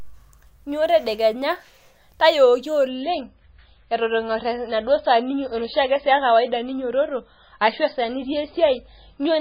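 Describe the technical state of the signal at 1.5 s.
At 1.5 s the speech signal is intact, with no audible technical fault at that point.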